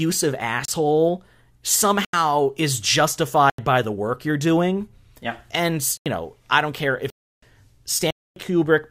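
Speech cut by hard dropouts, blocks of digital silence at 0.65 s (30 ms), 2.05, 3.50 and 5.97 s (85 ms each, fitting a 4096-sample buffer), 7.10 s (320 ms) and 8.11 s (256 ms), where samples were zeroed, mainly from late buffer fills.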